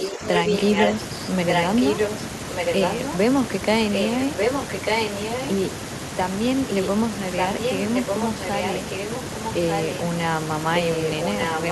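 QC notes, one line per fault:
0.0–0.93 s, 1.48–2.15 s, 2.49–3.17 s, 3.93–5.51 s, 7.37–10.0 s and 10.75 s to the end: echo leak. A delayed copy of the speech returns about 1.19 s late, roughly level with the speech or slightly below it. This is likely a loudspeaker echo that the far end's canceller failed to remove.
0.1–0.51 s: speech suppressed in double talk. The speech dips by up to about 5 dB in short pieces totalling around 200 ms. This is likely the echo canceller turning the talker down while the other side spoke.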